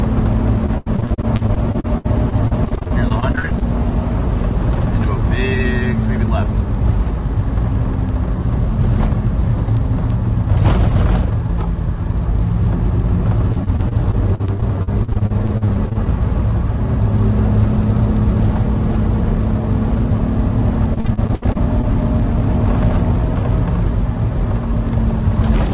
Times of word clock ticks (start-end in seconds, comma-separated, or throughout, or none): 0.37-25.73